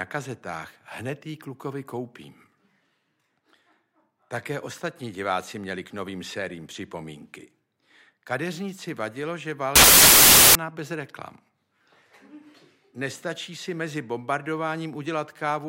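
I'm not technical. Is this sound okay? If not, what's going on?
No. From 9.76 to 10.55 s, samples built from the wrong bytes turn the audio into loud hiss, unlike ordinary background noise, because the bytes of each sample are put together wrongly.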